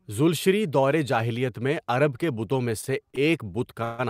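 From 2.81 to 3.18 s the speech stutters with repeated stalls: four brief holds, none longer than 30 ms, where the jitter buffer ran dry and the last sound was stretched to cover them. About 71 ms is filled this way, nearly a fifth of the span, with nothing lost. Unlike a freeze, the drag comes in several short catches rather than one hold.

At 3.84 to 4.01 s a single call audio freeze sets in: the sound hangs as a continued buzz or hiss for 146 ms, never dropping to silence, then resumes exactly where it stopped. Packets likely held up in transit emptied the buffer and pushed the remaining audio later by that same amount.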